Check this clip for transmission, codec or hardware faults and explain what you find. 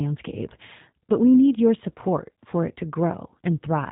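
One codec fault is present. Throughout, the speech carries G.729 coding damage that is plainly audible. The codec rebuilds each 10 ms frame from a vocal-tract filter, a pitch predictor and a few excitation pulses, leaving a rough, synthetic texture that fits an 8 kbit/s stream. Nothing passes above 3.8 kHz, so the sound is also dull.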